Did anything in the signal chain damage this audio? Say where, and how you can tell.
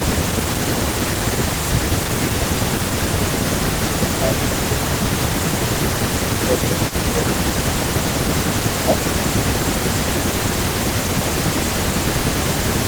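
Yes. The speech repeatedly dips by about 15 dB, then recovers, from 0.0 to 0.77 s, 1.44 to 1.86 s, 2.59 to 3.39 s and 3.99 to 4.62 s. From 5.49 to 12.68 s it stays held down for much of the stretch. This is speech suppressed in double talk at the call-processing stage. The echo canceller likely could not tell this talker apart from the far side playing through the loudspeaker, so it ducked both.

From 6.37 s to the end, a faint delayed copy of the speech trails the original by about a third of a second (331 ms), sitting roughly 15 dB below the direct signal. This is echo leak, again in call processing. One side is likely on a loudspeaker, and its echo canceller failed to remove everything its microphone picked up, so the residue came back down the line as a late, quieter repeat.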